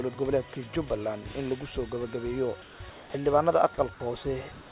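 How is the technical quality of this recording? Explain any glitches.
The recording has repeated gaps where the sender's voice-activity detection cut in, plus the narrowband sound of a telephone-grade codec with nothing above 4 kHz, which fits G.711 mu-law at 64 kbps.

Comfort noise in place of the background, from 2.62 to 2.80 s, 2.90 to 3.14 s, and 4.52 s to the end: the sender likely stopped transmitting during quiet stretches, and the receiver filled each pause with synthetic noise shaped to resemble the background. The real room tone, roughly 20 dB below the loud passages, is replaced by a flat, textureless hiss about 3 to 4 dB quieter. The drop in level and the loss of detail make each pause sound like a dull patch.

Onset clipped by the voice detector, at 3.11 s (30 ms) and 4.70 s (20 ms): the detector was likely slow to register that sound had resumed, so the opening of the new sound was never sent and comfort noise covered it. 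Both times the sound jumps in abruptly, without its soft attack, emerging straight out of the synthetic hiss instead of building up naturally.

Sound dropped by the voice detector, at 3.74 to 3.78 s and 3.94 to 4.00 s: the detector likely mistook quiet material for background and briefly stopped sending. About 30 ms of real sound is lost each time and replaced by steady noise. The result is two short dips where the sound momentarily thins into hiss before returning once transmission resumes.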